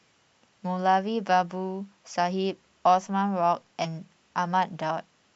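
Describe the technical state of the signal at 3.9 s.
From 3.84 to 3.87 s, compressed frames are skipped. About ten 10 ms frames, roughly a tenth of a second, never play, so the speech jumps ahead at the join. Spectrograms show formant tracks shifting suddenly.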